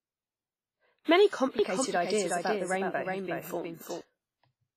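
Throughout the clip the speech carries heavy codec damage: a ringing, washy quality with hiss that swells and fades along with the signal, and nothing above 15.4 kHz. This is most likely WMA compression at a low rate, around 24 kbps. Long transform blocks smear quantisation noise over tens of milliseconds and drop weak spectral lines. Unlike plain broadband noise, this hiss follows the loudness of the speech rather than sitting at a steady level.

From 1.27 to 1.31 s a sharp attack is preceded by pre-echo: about 41 ms of hiss arrives before the onset itself, and the attack sounds softened and smeared. The coder spread the noise budget for the loud part across its whole block, so it also filled the quiet moment before. What marks it apart from an echo is its position: the smear comes ahead of the sound, not after it.

From 1.59 to 4.01 s a doubled audio track appears. A second full-band copy of the speech runs about four tenths of a second behind the original and a few dB quieter. 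It switches on and off abruptly at those two times. This is likely a second capture through a slower path or an edit holding two out-of-step copies. Unlike a room echo, the copy has no decay, no repeats and no room colouring.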